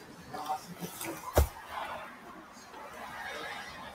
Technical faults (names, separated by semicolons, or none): noise suppressor applied to music or sounds; sound cut by the noise suppressor